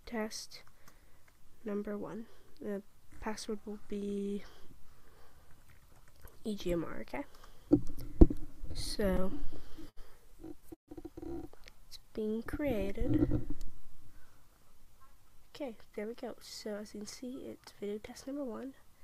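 Between 8.59 and 9.99 s, packets kept arriving late or more slowly than they were played, so the jitter buffer ran dry again and again, producing repeated stalls (stutter). Thirteen times the receiver stretched out the last sound to cover the wait, 212 ms in total and about 15% of that stretch, the longest single hold lasting 75 ms. Nothing is lost, but the audio lurches forward in short catches and drags. Shortly after, from 10.74 to 10.91 s, comes a call audio freeze, likely from packets held up in transit that left the buffer empty. The last sound is carried on briefly and then drops to silence for about 120 ms of the 138 ms hold, and the audio picks up exactly where it stopped. The whole stream now runs 138 ms later, because a gap has been inserted rather than anything removed. From 11.97 to 12.76 s, the buffer was low and needed a reserve, so the receiver repeated single pitch periods and slivers of pauses many times over. 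This jitter buffer slow-down added 60 ms and played that passage at 93% speed. The pitch stays the same, but sounds are drawn out and the pace goes slack. Later, from 14.63 to 16.81 s, the buffer held more audio than it aims for, so the receiver trimmed short pieces of one or a few pitch periods in quick succession. In this jitter buffer speed-up, about a fifth of a second was cut away, and the audio runs at 108% speed with unchanged pitch, sounding hurried.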